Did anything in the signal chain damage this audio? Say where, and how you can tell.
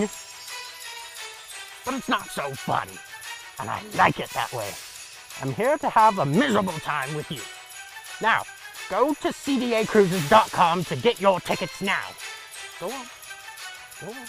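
No, nothing in the chain damaged it.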